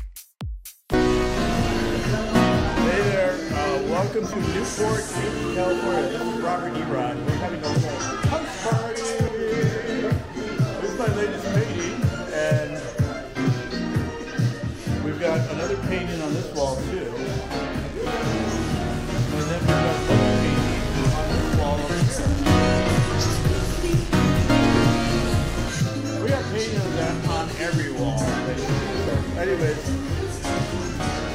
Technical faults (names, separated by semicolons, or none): audio missing between chunks